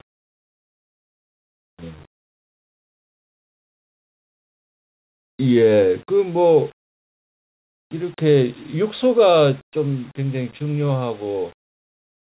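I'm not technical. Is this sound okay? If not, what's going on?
Yes, this sound is okay, and nothing is going wrong in it.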